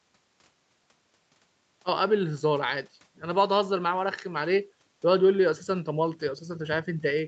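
No technical faults can be heard in the speech, which has the normal band-limited sound of a call path with nothing above 8 kHz.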